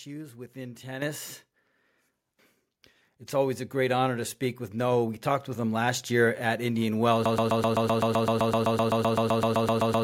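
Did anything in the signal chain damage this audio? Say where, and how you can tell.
Yes. In the call processing stage, automatic gain control raised the microphone's input volume in a single microphone volume step at 1.02 s. Speech and background noise jump together by about 9 dB at that instant.

From 7.26 s to the end, a broken-record loop replays one 128 ms fragment back to back, 22 times. The likely cause is a stalled stream or playback buffer that kept resending its last chunk, so the speech that should follow is lost.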